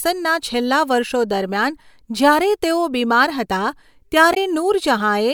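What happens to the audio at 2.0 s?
Nothing goes wrong at 2.0 s: the speech carries on intact through that moment, with no dropout, click, distortion or other fault to be heard.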